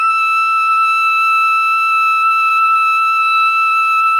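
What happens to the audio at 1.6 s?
Nothing goes wrong at 1.6 s; the music plays through that moment intact, with no dropout, click or distortion.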